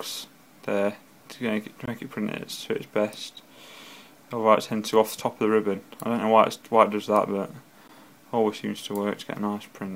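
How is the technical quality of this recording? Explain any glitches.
The recording has two brief silences, 1.86 to 1.88 s and at 7.88 s, about 20 ms and 16 ms long. These are gaps at joins of encoded pieces: separately encoded sections were joined with their start delay and end padding left in, so the sound drops out and resumes exactly where it left off. The regular 6.0 s spacing and smeared edges set them apart from random dropouts.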